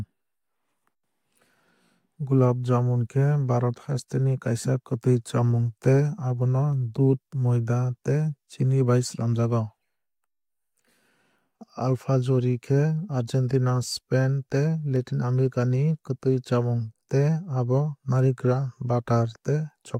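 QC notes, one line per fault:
6.73 s and 14.96 s, dropped samples: a few samples likely went missing from the stream, a fraction of a millisecond each time, so the waveform jumps straight to a later value. Too brief to lose any sound, each gap is heard as one sharp, isolated click.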